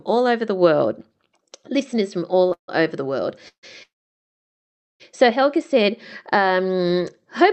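A short stall from a late packet comes at 2.49 to 2.53 s, just after "listeners from". A packet arrived late and the jitter buffer ran dry, so the receiver stretched the last sound by 16 ms, a held sound with a slight buzz or dip, before continuing with "over the world".

Call audio freezes follow at 2.53 to 2.70 s, 3.48 to 3.65 s and 3.83 to 5.02 s. The last two come after "over the world". Each is a fading buzz or hiss, then silence, inserting gaps of 0.15, 0.15 and 1.17 s without losing sound. Packets were likely delayed, emptying the jitter buffer.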